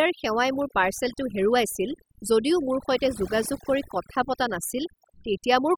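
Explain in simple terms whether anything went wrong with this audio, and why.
A noise reduction tool was set far too strong, which is overdone noise removal, and it affects the whole clip from start to finish. The tool guessed what the background noise sounded like, then switched off any narrow slice of sound that came close to that guess. Soft parts of the speech got caught too. So the pauses fall to near silence with twinkling specks.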